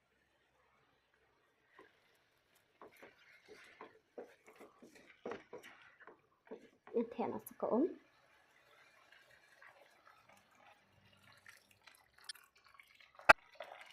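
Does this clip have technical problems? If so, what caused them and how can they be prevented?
Yes. Corrupt frames were decoded at 3.19, 10.71, 12.29 and 13.29 s. Flipped bits put energy at wrong frequencies, giving short blips that peak between about -60 and -10 dBFS. Checksums with concealment of damaged frames would prevent this.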